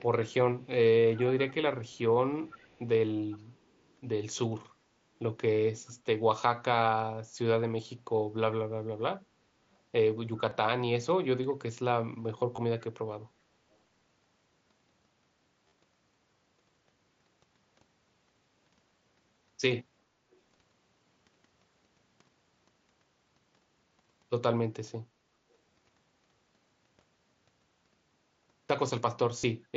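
Early on there's echo leak: a faint delayed copy of the speech trailing about 0.38 s behind, at 0.62–0.67, 1.88–1.98, 2.29–2.79, 3.3–3.38 and 5.86–5.92 s. It's mostly scraps, sitting roughly 30 to 35 dB down, though the half-second stretch at 2.29 s is louder, about 25 dB under the speech. Most likely the far end is on a loudspeaker and its echo canceller let some of that pickup through and sent it back.

Then come the concealed Bluetooth headset packet loss dropouts. At 10.50 s a single tiny gap of 7.5 ms is almost invisible, since the receiver just repeats a matching bit of the last waveform. At 12.56–12.58 s (22.5 ms) and 15.68–15.72 s (37.5 ms) the patching runs longer and turns into a brief buzzy held tone with a slight warble as real audio returns. Those lengths fit consecutive 7.5 ms mSBC frames going missing.

At 20.31–20.35 s one more echo scrap shows up, very faint at about 40 dB down. 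At 29.39–29.44 s the longest Bluetooth loss, 45 ms, gives a buzzy held tone, layered on the mSBC codec's light graininess.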